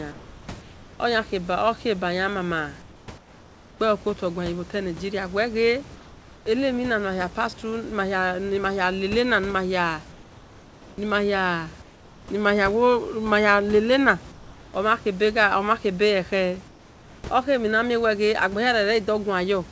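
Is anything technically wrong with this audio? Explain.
Yes. At 0.12–1.00, 2.82–3.80, 5.96–6.46, 10.12–10.98, 11.82–12.28, 14.32–14.74 and 16.68–17.24 s, comfort noise replaces the background, likely from discontinuous transmission halting audio during pauses. The room noise becomes steady, featureless hiss, in the last five pauses about 3 to 5 dB quieter.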